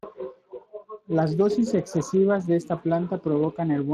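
Throughout this short speech clip the voice has a rough, hoarse grain and a noisy edge, and the upper band sounds like shaped hiss rather than real detail, with nothing at all above 15.1 kHz. This is plainly audible Speex codec damage. The CELP model has too few bits to code the excitation accurately, so its errors come through as noise and hoarseness. The amount of damage fits a bitrate of around 22 kbps.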